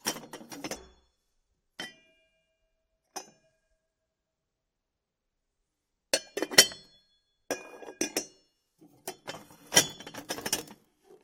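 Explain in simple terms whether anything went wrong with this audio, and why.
Two quick blips, at 0.76 s and 3.12 s, are damaged data in a compressed stream: bad bytes made the decoder misread those frames and briefly lose its place.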